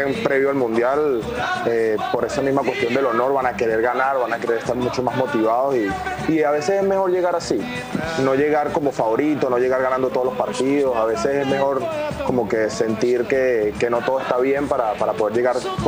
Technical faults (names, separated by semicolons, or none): none